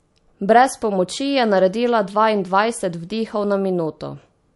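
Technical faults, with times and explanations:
Throughout, MP3 compression: likely a low bitrate, about 48 kbps; nothing above 11.3 kHz, and watery, swirling speech as weak frequency lines switch on and off between frames.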